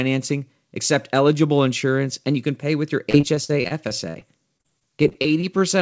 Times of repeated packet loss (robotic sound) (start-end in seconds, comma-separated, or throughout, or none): 3.10-5.63